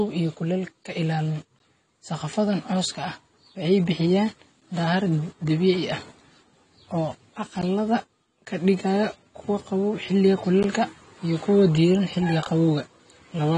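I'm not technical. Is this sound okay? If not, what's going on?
No. Two things are wrong with this recording.

The whole clip sounds dull and plainly smeared. Nothing is present above about 10 kHz, so the crisp top end of the speech is gone, and the s sounds have a fizzy, wobbly texture. This is most likely AAC compression pushed too hard: the encoder saved space by discarding the high frequencies and coarsening the detail it kept.

There are also three very short dropouts, each lasting about 13 milliseconds, at 1.59, 4.60 and 10.63 seconds. They are brief clean cuts to silence, heard as small stutters. This is a gap between chunks. The audio was handled in pieces about 3 seconds long, and a sliver of silence was left where pieces were joined. Nothing is missing from the speech, but its flow is broken at each join.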